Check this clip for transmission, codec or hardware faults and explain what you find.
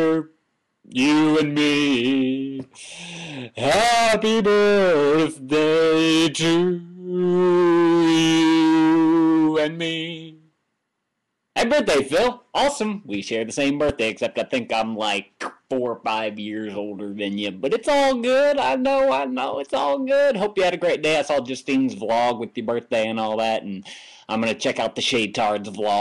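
One fault stands out: a single brief glitch in the compressed stream.

Damaged data in a compressed stream, at 13.89 s. For a moment the encoded data reaching the decoder was corrupt, with bytes lost, blanked or overwritten by unrelated data. The decoder either misinterprets that frame or throws it away, loses its place in the stream, and has to hunt for the next valid frame header before it can resume. The result is a very short, blip-like artefact lasting only around 13 ms.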